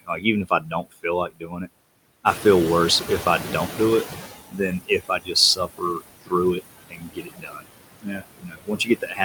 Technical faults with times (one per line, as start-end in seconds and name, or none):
0.00-9.25 noise suppressor artifacts
0.01-1.67 speech cut by the noise suppressor
2.26-4.35 noise suppressor catching up
4.51-7.66 speech cut by the noise suppressor
8.00-9.25 speech cut by the noise suppressor